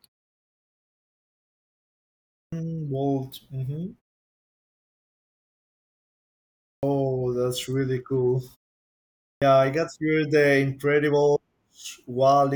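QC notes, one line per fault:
2.44 s, 6.75 s and 9.34 s: clipped start after a pause. After silences of 2.44 s, 2.82 s and 0.86 s, the output device sleeps and must wake and relock, swallowing the first 84 ms, 79 ms and 77 ms of speech, so each onset begins abruptly.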